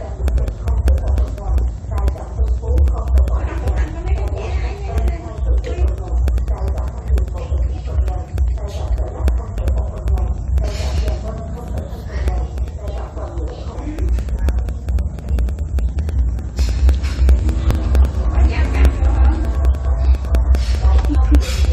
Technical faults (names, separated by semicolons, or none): periodic USB or driver dropouts; damaged data in a compressed stream